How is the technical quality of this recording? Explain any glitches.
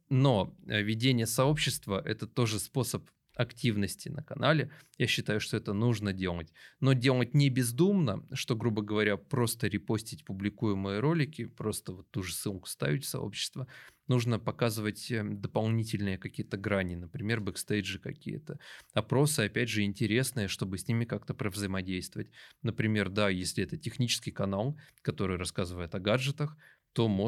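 No technical glitches are audible.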